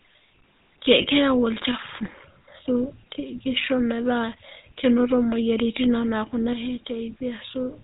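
The whole speech clip runs through a GSM full-rate codec, and it's plainly audible: everything above 4 kHz is gone, and the voice has that gritty, buzzy edge from the pulse-driven excitation, which fits the old 13 kbps GSM coding. High, bright parts of the voice get the roughest treatment.

From 1.02 to 1.06 s there's a lost GSM frame, about 20 ms of sound. The decoder papers over it by reusing the previous frame's settings, so you hear a brief metallic, ringing smear instead of a clean gap.

At 6.53 s the level abruptly sags by about 6 dB and stays down through the end of the clip. The sound stays intact, just quieter. That's most likely one channel dropping out before the mono mix, leaving only half the summed signal.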